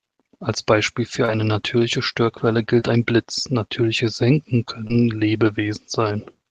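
Short concealed packet loss hits this speech three times: at 1.25 to 1.30 s, just before "eine natürliche", at 2.80 to 2.83 s, and at 4.87 to 4.91 s. Each time roughly 20 ms of the call's audio arrived too late to decode, and the receiver papered over the gap by extending the preceding sound before easing back into real audio. Each event is heard as a brief smear or wobble lasting a few hundredths of a second.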